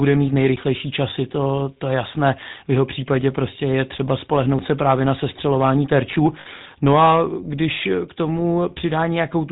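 Speech, and the whole clip carries the buzzy, gravelly grain of the GSM full-rate codec, with plainly audible damage. That coder models the vocal tract and drives it with a sparse, regularly spaced pulse train rather than the real excitation, which gives voiced sounds their rasp. Nothing gets through above 4 kHz, so the top end is dull. The overall character fits the old 13 kbps full-rate mode. Then from 6.4 to 6.47 s there's a brief burst of lost GSM frames, about 60 ms, which fits three dropped frames. The decoder covers the gap by reusing the settings of the last good frame, so instead of a clean dropout you hear a short, rough, metallic ring where the sound gets frozen and smeared before normal decoding resumes.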